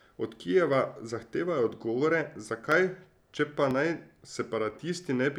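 At 0.73, 1.72, 2.72, 3.71 and 4.70 s the speech jumps slightly, each time losing just a few milliseconds. The steady one-second rhythm points to audio missing between chunks, likely from a recorder dropping a sliver at each chunk handover.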